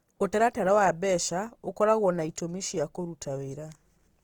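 Throughout, the speech carries plainly audible Opus compression, likely at around 24 kbps in CELT mode: energy-filled bands sound grainy and rough, and the spectrogram shows noise-textured detail reaching 20.2 kHz.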